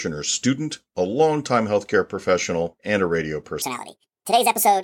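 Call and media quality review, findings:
Section at the wrong speed, 3.62 s to end of clip. Starts right after "professional and a radio". Speech jumps high and hurried. Playback runs 1.66 times too fast. Pitch rises about ten semitones along with it. Speed and pitch shift together, abruptly. Likely cause: resampling or playback stage clocking this segment at the wrong rate. Audio before 3.62 s plays at its proper speed.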